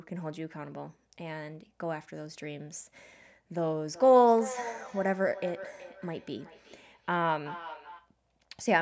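From 3.88 s to 8.14 s the speech carries a feedback echo between two devices. Another device in the same room is playing this call's audio aloud, and this microphone picks it up again. The local echo canceller can't remove sound it didn't play itself. Each word returns roughly every 400 ms, thinner and ringing. At its loudest the echo sits about 14 dB below the speech, over a call band with nothing above 8 kHz.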